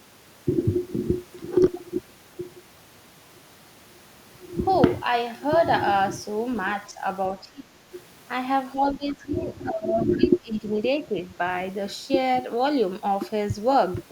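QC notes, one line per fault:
6.92–7.0 s, 7.41–7.82 s, 8.75–10.64 s: speech suppressed in double talk. The talker's level dips by a few decibels in the brief first event, then by about 20 to 25 dB in the later two, with the longest stretch chopped over roughly a second and a half. The likely cause is an echo canceller that couldn't tell the talker from the far side's echo and attenuated both. On a waveform the envelope collapses in patches, and a spectrogram shows the upper harmonics thinning or vanishing in those windows.
10.12 s: other side's voice leaking through. A faint scrap of a second voice, about 25 dB below the talker, surfaces inside the suppressed stretch, likely residual loudspeaker echo the canceller failed to remove. On a spectrogram it appears as a brief, weak smear of unrelated harmonic energy.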